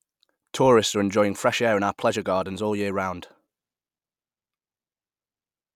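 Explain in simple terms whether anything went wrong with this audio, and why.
Nothing went wrong here: no faults turn up anywhere in the speech recording.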